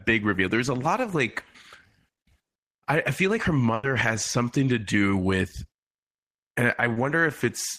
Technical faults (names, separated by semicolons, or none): burst of packet loss; short concealed packet loss